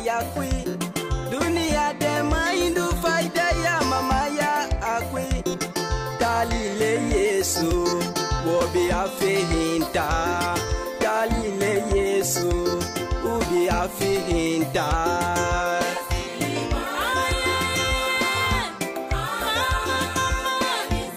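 Nothing in this audio stands out as a technical fault, so there's nothing to flag at any point along the way.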